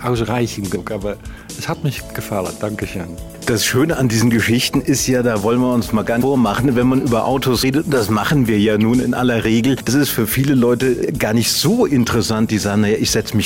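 The audio jumps forward at 0.75 s, 6.20 s, 7.62 s and 9.87 s. Each time a short stretch of sound simply goes missing: about a tenth of a second at 0.75 s, about a fifth at 6.20 s, and about 70 ms at the last two. These are compressed frames skipped. Whole coded blocks were absent or rejected by the decoder, and the jump sizes suggest frames of about 23.2 ms.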